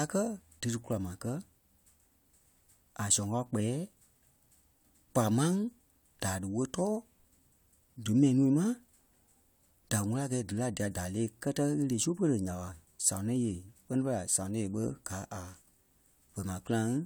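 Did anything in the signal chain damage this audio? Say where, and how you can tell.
No, nothing in the signal chain damaged this speech.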